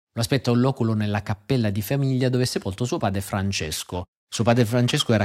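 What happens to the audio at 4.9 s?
At 4.9 s the converter's sampling clock is being shaken at around 2 kHz, a periodic clock jitter that runs from 3.61 s, just after "è sepolto suo padre", to the end of the clip. The uneven timing puts sidebands about 2 kHz above and below every component of the speech, more strongly on the higher ones, so the voice takes on a rough, metallic edge that drops out in the pauses.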